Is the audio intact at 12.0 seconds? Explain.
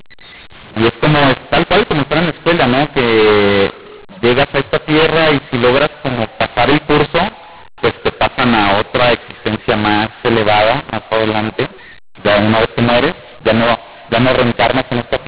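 No. At 12.0 seconds, as throughout, the audio has mu-law and A-law mixed up: A-law telephone samples are read as mu-law, scrambling levels. The speech sounds harsh and distorted, pauses hiss, and the waveform shows erratic amplitudes with no flat silences.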